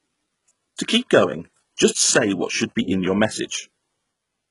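Throughout the speech, the audio was most likely squeezed through HE-AAC compression at a very low bitrate, around 12 kbps by the sound of it. Only the lower spectrum is truly coded; the treble is rebuilt by copying lower bands upward under a rough envelope, so its harmonics never line up with the real ones. The damage is heavy: s sounds come out gritty and lispy with a metallic sheen, and nothing reaches above about 11.1 kHz.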